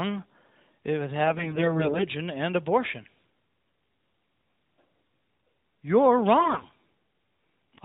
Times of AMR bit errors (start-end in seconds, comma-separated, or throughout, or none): 1.28-2.06, 6.40-6.65